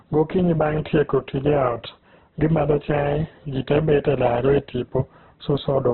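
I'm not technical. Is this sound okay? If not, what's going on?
No. From start to finish the speech sounds muffled and rough, with a grainy edge instead of clear detail. Nothing is heard above about 4.1 kHz, so it has the closed-in quality of an old phone line. The likely cause is heavy Opus compression squeezing the audio hard. A plain filter would only dull the sound; here the texture itself turns noisy and grainy, and there is little of the watery swirl that MP3 damage gives.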